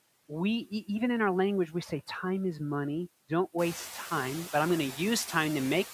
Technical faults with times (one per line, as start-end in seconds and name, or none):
0.00-5.93 noise suppressor artifacts
4.17-5.93 pre-emphasis left on